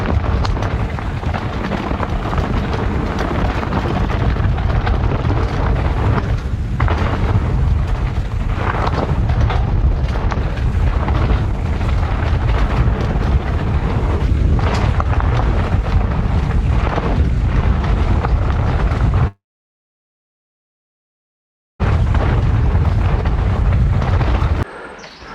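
At 19.27–21.82 s, likely a long network dropout: a brief fading buzz, then 2.4 s silence (flat waveform, blank spectrogram). Audio then resumes minus that stretch.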